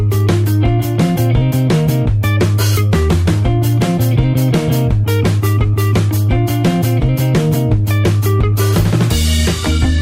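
No dropouts, clicks, distortion or timing errors can be heard anywhere in the recording.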